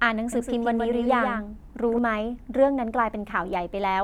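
From 0.33 s to 1.99 s the speech carries a doubled audio track. A second full-band copy runs about 150 ms behind the original and sits roughly 5 dB lower. It has no reverb tail and no room colour, so it sounds like a stuttering slap rather than an echo. It cuts in and drops out abruptly. The likely cause is a slower second capture path, or an edit leaving two copies out of step.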